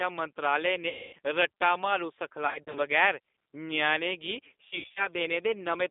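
Speech that sounds narrow, rough and slightly synthetic throughout, confined to roughly 250 Hz to 3.6 kHz, is the plainly audible signature of the G.729 codec, an 8 kbit/s VoIP coder that resynthesises the voice from a vocal tract filter and sparse pulses. At 0.89 to 1.15 s the voice smears into a fading buzzy tone or coloured noise, and at 2.47 to 2.79 s and 4.68 to 5.08 s it stutters and weakens. This is VoIP packet loss concealed by the speech codec: about 240 ms was lost in one block, then 140 ms and 180 ms in short runs scattered across 280 ms each. The decoder bridged the gaps by extrapolating and fading its last sound.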